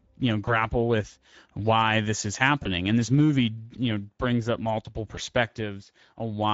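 The speech runs through the Speex codec for its whole length, at a rate near 17 kbps. Too few bits for the excitation leave the speech hoarse and grainy, and the top of the band is thin and noise-like.

VoIP packet loss concealed by the speech codec occurs three times. Each time the decoder, missing what sounds like a single 20 ms frame, guesses the gap from its last pitch and filter and fades the gain. The first is 0.45 to 0.65 s, after "you know" and before "with why this is." The stretched sound fades and the voice stays weak or distorted as the decoder recovers. The second is 2.63 to 2.68 s, after "with why this is," and the third is 5.15 to 5.19 s, after "know brings up multiple." Both are brief.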